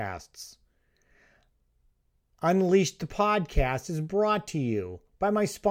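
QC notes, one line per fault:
No fault to note.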